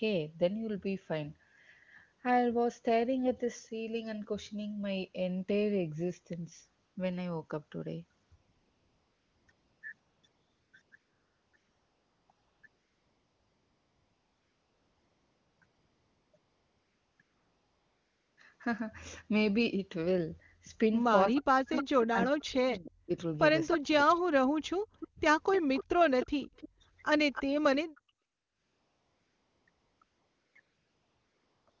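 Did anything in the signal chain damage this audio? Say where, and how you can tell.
Yes. AMR comfort noise appears in the codec stage in repeated stretches from 6.85 to 18.37 s and again from 28.25 to 31.8 s. Real background gives way to smooth, steady synthetic hiss that switches in and out, unlike a simple gate's silence.

Speech suppressed in double talk at 21.3–23.11 s and 23.74–25.2 s, likely from call processing: the voice dips by roughly 40 dB in pieces while the far side talks, unlike a dropout's clean gaps.

Echo leak at 21.35–22.91, 23.69–24.2, 25.0–26.69 and 27.33–28.0 s: a copy of the voice returns 302 ms late, about 10 dB down (about 5 dB at 23.69 s), likely from a loudspeaker path's echo canceller leaving residue. The fixed delay separates it from room reverb.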